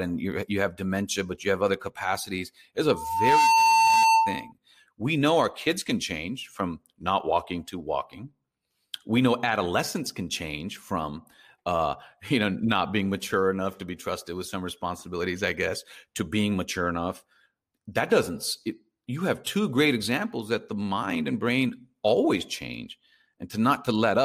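Just after "have other capacities it's", a steady 900 Hz tone swells over about half a second into a squeal some 10 dB above the speech, lasting from 2.90 to 4.52 s, before "we know our kids". This is loudspeaker feedback squeal: the microphone re-amplifies its own loudspeaker until that frequency runs away.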